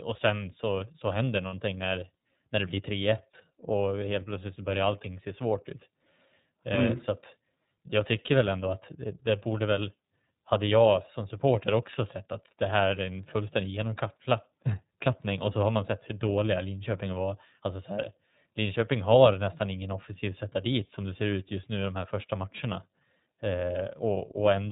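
Throughout, the speech carries iLBC codec damage: a narrowband, slightly rough, synthetic tone, with the spectrogram showing nothing above 4 kHz, coded in 30 ms frames.

From 1.46 to 1.54 s, between "sen så så händer" and "när när det blir", lost iLBC frames leave a held, buzzy vowel: the decoder repeating one pitch cycle, visible as flat, evenly spaced harmonics in a short spectrogram stretch that fits about two 30 ms frames.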